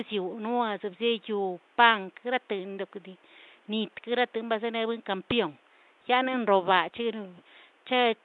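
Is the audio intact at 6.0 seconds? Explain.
No. At 6.0 s, as throughout, the speech has a coarse, hissy fringe and a muffled, underwater smear, likely from Nellymoser compression at a rate that fits about 44 kbps. It spends bits crudely on 256-sample blocks, leaving weak bands noise-filled. This noise tracks the speech, unlike the room noise sitting about 36 dB below.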